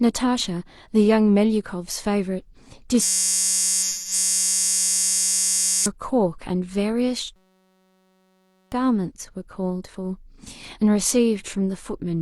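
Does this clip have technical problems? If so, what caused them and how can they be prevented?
Yes. A system hang loop occurs from 3.02 to 5.86 s and again from 7.36 to 8.72 s. The driver stalled while the hardware replayed one 5.33 ms buffer, which fits a 256-sample buffer. That produces a steady buzz at 188 Hz. Roughly three seconds, then about one and a half seconds, of speech are lost. Keeping the audio thread at real-time priority and adding a watchdog that mutes a stalled buffer prevents this.

AAC frame loss with concealment appears from 3.83 to 4.13 s. About 0.17 s of coded audio went missing, pointing to a few dropped frames. The decoder patched the gap from the last good spectrum, leaving a smeared, noisy stretch. Error protection or retransmission on the transport link prevents it.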